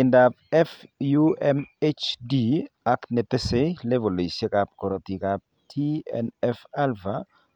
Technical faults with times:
none

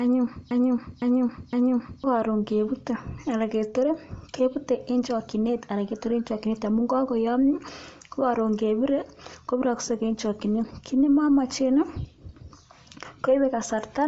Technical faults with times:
0.00-14.08 Bluetooth LC3 compression
0.00-2.04 broken-record loop

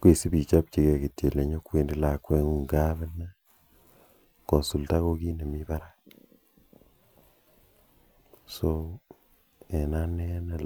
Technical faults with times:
none

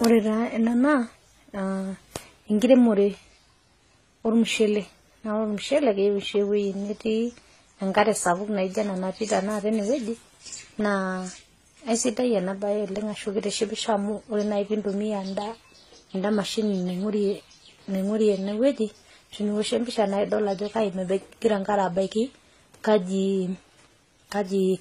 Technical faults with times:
0.00-24.81 transcoding between lossy codecs

